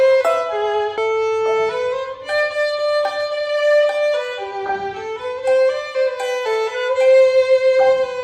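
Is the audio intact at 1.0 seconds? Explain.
No. Just before 1.0 s, at about 0.98 s, there is damaged data in a compressed stream: corrupted bytes cause the decoder to misread the frame there and lose sync while hunting for the next valid header. The result is a brief chirp or blip.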